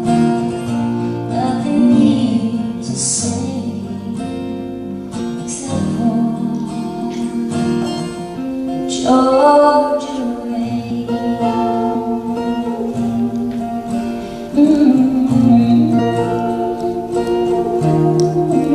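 Compressed frames skipped at 5.18, 7.01, 10.89, 14.56 and 15.98 s. Whole frames of about 23 ms are missing or rejected, so the sound jumps ahead roughly a tenth of a second, or a fifth at 10.89 and 14.56 s.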